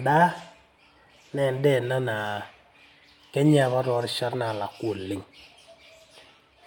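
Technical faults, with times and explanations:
No technical faults can be heard, so there are no times or explanations to give.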